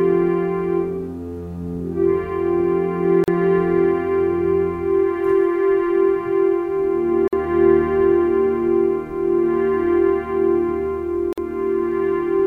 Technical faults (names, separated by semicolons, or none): gap at a join of encoded pieces